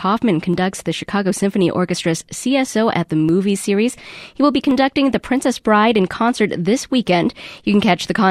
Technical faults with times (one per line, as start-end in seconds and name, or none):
0.54 dropped samples
3.29 dropped samples
4.71 dropped samples